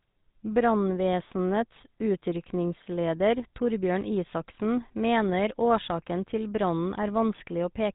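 Throughout, the speech carries a plainly audible GSM full-rate codec character, a buzzy, gravelly roughness consistent with 13 kbps coding; a spectrogram shows nothing above 4 kHz.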